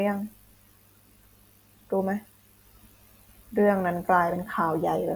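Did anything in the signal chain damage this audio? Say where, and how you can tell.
No, nothing in the chain audibly damaged this speech.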